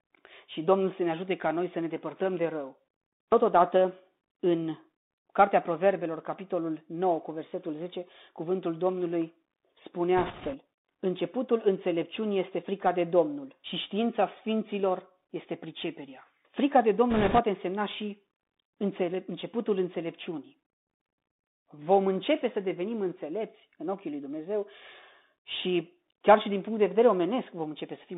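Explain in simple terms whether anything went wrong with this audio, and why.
The speech went through a Bluetooth CVSD headset codec, the narrowband link headsets use for calls. It keeps only roughly 200 Hz to 3.7 kHz and describes the waveform one tiny step up or down at a time. Anything higher is simply missing, so the speech sounds muffled and phone-like. Where the sound moves quickly, the steps can't keep pace, so s sounds turn scratchy and a grainy hiss sits under the speech the whole way through.

Twice the radio link itself got noisy, causing bit errors on a Bluetooth voice link: some of the transmitted ones and zeros arrived flipped. This first happens from 10.17 to 10.56 s, at a rate of a few percent, and again, more heavily, from 17.10 to 17.39 s, just before "însemna și înțelep începutul". Each flipped bit nudges the sound only slightly, so there are no sharp clicks, just short bursts of rushing crackle, stronger in the second burst.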